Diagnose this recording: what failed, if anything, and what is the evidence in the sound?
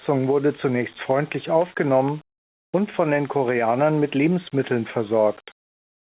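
Nothing in this speech recording stood out on listening as a failure at any stage of the chain.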